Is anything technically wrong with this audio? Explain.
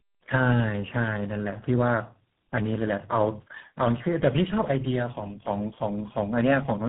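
Yes. Tandem speech coding runs throughout the speech: it passed through three separate speech coders in a row, each re-encoding the previous coder's damage. The result sounds rough, muffled and warbly, with nothing above 3.8 kHz, and GSM full rate was the last coder.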